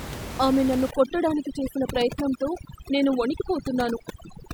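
A speech recording with room noise sitting about 10 dB below the voice, showing overdone noise removal from 0.91 s to the end: bands near the noise estimate are cut away, so the background drops to twinkling near-silence, unlike plain steady hiss.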